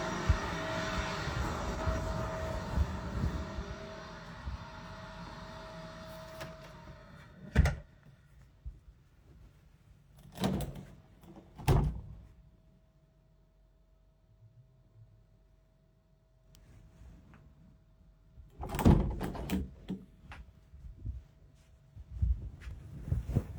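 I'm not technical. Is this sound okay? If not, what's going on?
No. There is one brief fault near the end, at about 22.71 seconds. It is a block of digital silence. For about 2.7 milliseconds, the sound drops to silence and then comes straight back. There is no fade in or out. Because it is so short, you hear a quick tick or dip rather than a gap. The hole is far too short to notice as silence.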